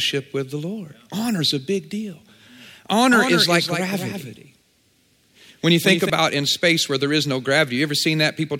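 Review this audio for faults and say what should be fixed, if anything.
From 3.12 to 6.10 s a dry copy trails the speech by about 200 ms: a doubled audio track, likely captured twice through a slower second path. Route each source through a single capture path and mute any duplicate input or monitoring return before recording.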